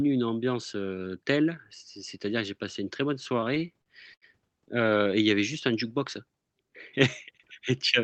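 French speech heard through a call codec, with repeated stalls (stutter) from 3.23 s to 4.25 s, starting after "passé une très bonne" and ending before "heu et il y". Packets arrived late, so the jitter buffer ran dry seven times, and the receiver stretched the last sound to cover about 183 ms, roughly 18% of that second, with the longest gap 79 ms. No audio is lost, but the speech drags and stutters. The codec band-limits the audio at about 8 kHz, which fits Opus around 24 kbps.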